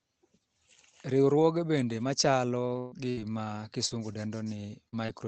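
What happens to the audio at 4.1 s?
Repeated packet loss (robotic sound) runs from 2.79 to 5.10 s. Five gaps fall within it, the longest 123 ms, and each is patched by stretching the previous sound, so the audio turns choppy, with roughly a tenth of a second rebuilt.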